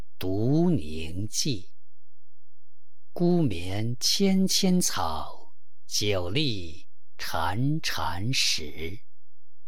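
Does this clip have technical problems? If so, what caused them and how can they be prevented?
Yes: DC offset runs throughout, a constant shift of about -27 dBFS that displaces the waveform from zero, wasting headroom and showing as a steady band at 0 Hz. A high-pass filter or DC-blocking stage at recording prevents it.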